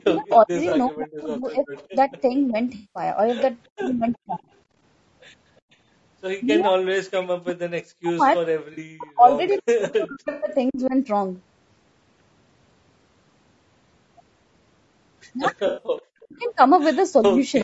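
Low-delay AAC compression runs throughout: the speech sounds rough and grainy, with noise between harmonics. This is likely AAC-ELD at around 32 kbps, whose short frames resolve pitch poorly.

Speech suppressed in double talk appears from 0.0 to 2.55 s, 3.76 to 4.3 s, 6.63 to 11.07 s and 15.99 to 17.38 s. The voice dips by up to about 40 dB or drops out in pieces, likely because the echo canceller turned down both talkers at once.

Echo leak appears at 0.21 to 0.36 s, 1.75 to 2.21 s, 3.99 to 4.43 s and 9.58 to 10.13 s. A faint copy of the voice follows 365 ms behind, about 25 to 30 dB down, likely loudspeaker pickup the far end's canceller missed.

AAC frame loss with concealment occurs at 0.69 to 0.72 s, 2.75 to 3.03 s, 8.73 to 8.79 s, 10.31 to 10.48 s and 15.67 to 15.85 s. The decoder fills 20 to 200 ms gaps from the last good spectrum, producing smeared, phasey patches. The longest gap fades toward silence.

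The call's microphone processing, working normally, leaves nothing above 8 kHz.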